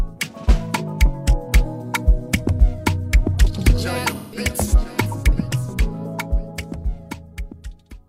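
From 4.11 to 4.39 s, AAC frame loss with concealment leaves a gap of about 170 ms, which fits roughly four lost frames. The decoder repeats the last good spectrum with scrambled phase, so the audio smears into a noisy, phasey wash instead of the hard silence of a plain dropout.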